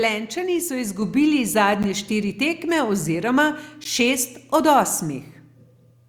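At 1.02 s the microphone volume is stepped up by about 5 dB, with voice and background jumping together. That shared jump distinguishes it from a speaker simply getting louder. A gap between chunks opens at 1.83 s and again at 3.84 s, each a 13 ms hole about 2 s apart. The regular spacing and the absence of lost sound distinguish these gaps from random dropouts.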